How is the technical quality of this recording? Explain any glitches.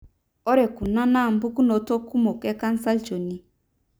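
The recording has one glitch. At 0.86 s, a block of digital silence cuts out the speech for about 0.73 ms, which fits a 32-sample block the program likely failed to fill in time. A gap this short is heard as a brief tick or dip.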